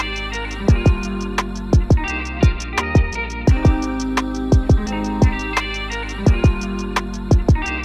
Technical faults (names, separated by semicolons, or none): none